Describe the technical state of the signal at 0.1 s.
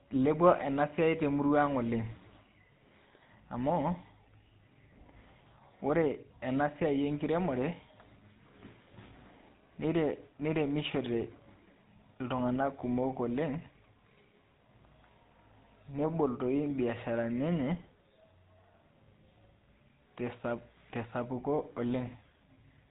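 At 0.1 s the speech already carries the GSM full-rate codec damage that runs through the entire clip. The codec models the vocal tract and excites it with regularly spaced pulses that keep only a fraction of the excitation detail, giving a plainly audible buzzy, gravelly roughness and nothing above 3.8 kHz, which fits a 13 kbps stream. A simple low-pass filter would only dull the sound; this pulse-driven rasp marks the codec.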